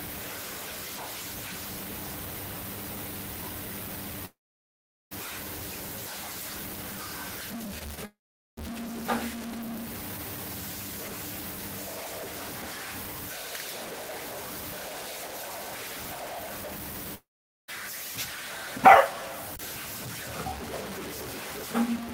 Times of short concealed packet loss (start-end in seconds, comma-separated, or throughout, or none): 7.79-7.99